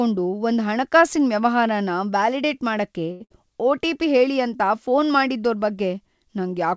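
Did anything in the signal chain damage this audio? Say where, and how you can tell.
Yes. A short stall from a late packet happens in the network and jitter buffer stage, just after "ಹಣಕಾಸಿನ್ ವ್ಯವಹಾರನ ವ್ಯಾಲಿಡೇಟ್ ಮಾಡಕ್ಕೆ". From 3.12 to 3.22 s, a sound is held for 83 ms and then resumes from the same point. Unlike loss, nothing is skipped; the timing simply slips later.

A burst of packet loss at the same stage follows at 3.24 to 3.32 s. The last sound is continued and fades for 59 ms, then playback jumps ahead. About 60 ms of speech is gone, which is what distinguishes it from the stall.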